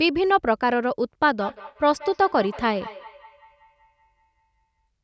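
From 1.31 to 4.87 s, feedback echo between two devices: speech re-enters through another device's speaker, recurring roughly five times a second, about 19 dB below the speech.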